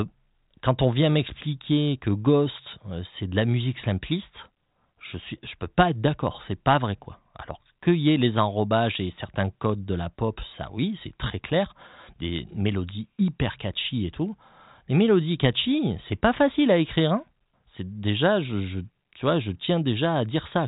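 The speech in the clip has no audible technical faults. It has passed through G.726 ADPCM at 40 kbit/s, which removes everything above 3.8 kHz and leaves at most a faint trace of its coding.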